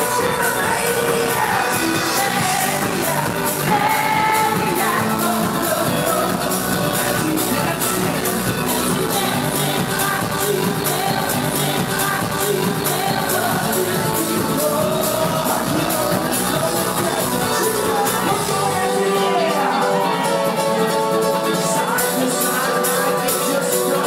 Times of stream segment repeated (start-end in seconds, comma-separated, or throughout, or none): 11.32-13.32